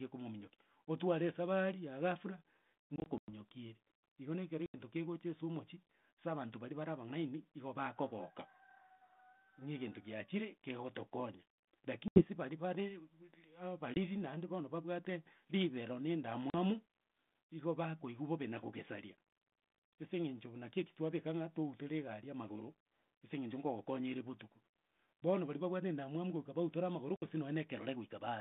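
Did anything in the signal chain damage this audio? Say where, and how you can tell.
Yes. Network packet loss on an ADPCM call: hard silent gaps at 2.96–3.30, 4.66, 12.08, 13.94, 16.50 and 27.16 s. Each is followed by briefly distorted speech while the decoder's predictor resyncs.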